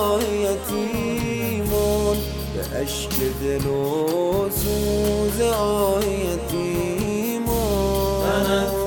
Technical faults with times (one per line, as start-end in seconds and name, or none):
none